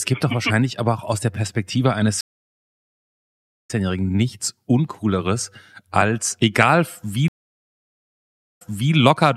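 At 2.21 s and 7.28 s a stream reconnect drops the speech into dead silence, about 1.47 s and 1.28 s, while a fresh decoder restarts. The first resumes roughly 1.5 s later, skipping material. The second resumes 0.37 s earlier, repeating it. Each shows as a flat waveform and a blank spectrogram column.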